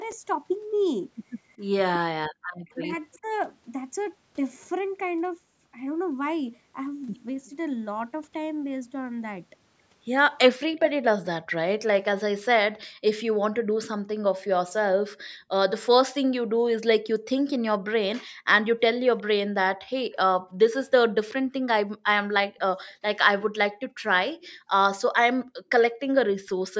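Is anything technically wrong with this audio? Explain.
Yes, a few echo-canceller problems. From 0.06 to 3.28 s there's speech suppressed in double talk: the voice dips by up to around 40 dB, about a second in total, likely because the canceller ducked both sides at once. Echo leak shows up from 0.09 to 3.18 s, 7.46 to 7.50 s and 19.17 to 22.94 s. It's a faint copy of the voice trailing about 371 ms behind, well below the speech, likely where loudspeaker pickup slipped past the canceller. Between 12.87 and 24.7 s the background is gated by the echo canceller: the room sound drops by about 40 dB, around a second overall, while the canceller clamps the mic during loudspeaker playback.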